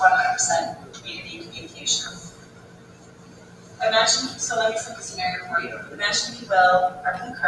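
A noise suppressor applied to music or sounds is active throughout, treating sustained material and ambience as noise and pulling it down by a varying amount, with the level swinging by around 15 dB. Onsets pass while held portions and tails sag, so the whole clip pumps and thins rather than sitting at a steady level.

The sound cut by the noise suppressor is plainest in three stretches: 0.76 to 1.06 s and 1.45 to 1.81 s, each dipping about 7 dB, then a longer stretch from 2.15 to 3.8 s that sinks about 9 dB. In each one the gate-like attenuation clamps down once the sound stops changing, so sustained parts fade and decays end abruptly.

A train of clicks runs from 5.58 to 7.45 s, with about ten near-identical ticks evenly spaced at 5.35 per second and peaking a few decibels above the surrounding sound. The steady repeat points to likely electrical interference or a faulty connection or power supply injecting the pulses, and they sit on top of the sound as a regular popping.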